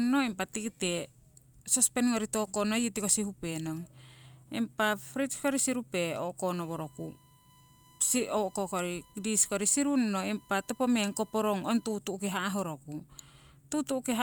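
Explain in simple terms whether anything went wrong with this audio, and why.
USB whine runs from 6.53 to 11.95 s as a faint, steady, high-pitched tone at 1 kHz behind the speech. A USB connection pulls power in regular 1-millisecond bursts, and that pulsing leaked into the audio through the shared power or ground wiring.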